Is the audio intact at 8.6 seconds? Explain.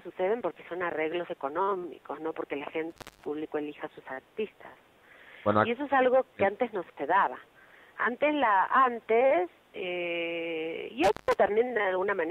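Yes, the audio is intact at 8.6 seconds, with no fault to be heard at that moment.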